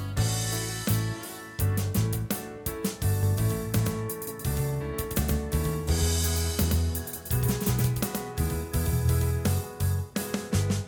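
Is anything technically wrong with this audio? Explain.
Yes, from 3.23 to 9.49 s there's a doubled audio track: a second copy trails about a tenth of a second behind, a few dB quieter, likely from a slower second capture path.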